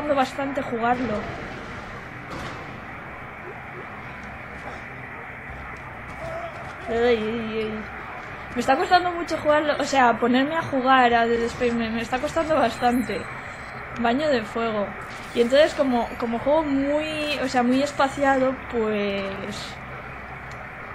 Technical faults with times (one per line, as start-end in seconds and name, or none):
none